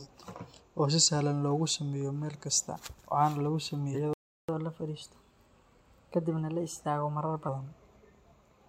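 At 2.77 to 2.81 s and again at 3.93 to 3.96 s, the speech lurches forward at an audible join. These are compressed frames skipped. Each time, a handful of 46.4 ms frames were dropped, losing roughly a fifth of a second.

From 4.13 to 4.49 s the audio falls silent mid-flow for about 0.35 s. This is a playback stall, likely the player running out of buffered data before resuming where it stopped.

From 4.49 to 7.49 s the speech runs hurried and slightly high, about one and a half semitones up, then settles. This is catch-up at higher speed. The player resampled its backlog at 1.1 times normal speed to recover most of the lost time.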